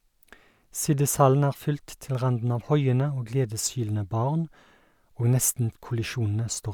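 Nothing in the speech stood out as a technical fault on listening.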